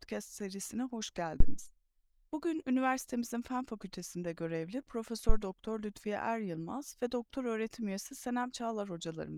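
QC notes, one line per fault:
1.40–1.62 s, phantom power thump: right after "serisine hoş", a supply switching on or off on the live input sends a voltage step through the coupling capacitors, producing a deep thump peaking at about −11 dBFS that decays in about 48 ms.
5.29–5.38 s, phantom power thump: another supply switch on the input passes the same kind of step, giving a shorter low thump peaking at about −12 dBFS and dying away in about 19 ms.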